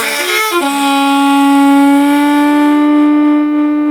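Throughout the clip there is gain pumping, a gain swing of around 25 dB, which likely comes from input gain set far too high with a fast limiter clamping it. The waveform looks flattened, with peaks squashed to similar heights.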